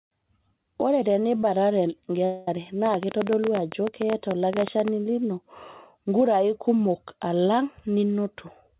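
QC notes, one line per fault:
2.25–2.48 s, long network dropout: the audio stops arriving, and the receiver fills the whole 0.23 s with a fading buzz of the last sound, likely packet loss.
2.86–4.89 s, train of clicks: about 30 similar pops at an uneven pace of about 12 per second, peaking about 15 dB above the sound, likely a faulty connection or equipment interference.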